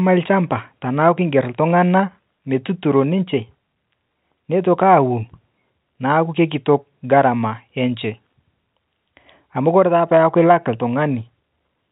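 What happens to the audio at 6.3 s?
Nothing goes wrong at 6.3 s: the speech carries on intact through that moment, still within the narrow telephone band of the G.711 coding.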